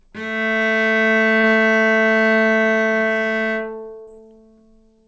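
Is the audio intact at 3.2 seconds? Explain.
Yes, the audio is intact at 3.2 seconds, with no dropout, glitch or other fault at that moment.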